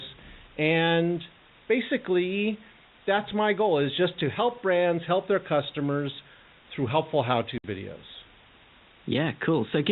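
A steady, even hiss runs under the speech from start to finish, with no harshness or distortion riding on the voice. This is low bit depth with dither: the signal is held to very few levels, which points to about 7 bits, and dither noise added before rounding turns the rounding error into constant white noise, sitting at roughly 25 dB below the speech. The telephone band-limiting from the G.711 A-law path is audible as the usual narrow, sub-4 kHz sound.

From 7.58 to 7.64 s the speech drops out abruptly into dead silence. This is packet loss filled with silence: 60 ms of audio never arrived and the receiver inserted nothing in its place rather than concealing the gap. The length fits three lost 20 ms packets, consistent with the hole being a whole multiple of the packet length.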